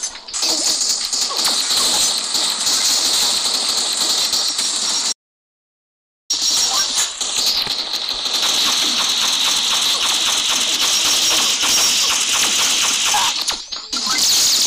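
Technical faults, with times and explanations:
5.13 to 6.30 s, audio dropout to silence: the input was likely lost while recording continued writing silence, so the sound cuts abruptly to silence with no room tone for 1.17 s.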